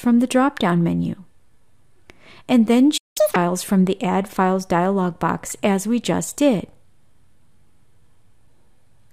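At 2.97 s the sound cuts out mid-flow and stays silent until 3.17 s, a gap of about 184 ms. This is a playback stall, likely caused by the player running out of buffered data or its output thread being blocked, leaving nothing to send.

From 3.17 s to 3.36 s the player works through its backlog with catch-up at higher speed, resampling to run at 2.0 times normal rate. The sound is audibly rushed and raised in pitch by around ten semitones, then snaps back to normal speed.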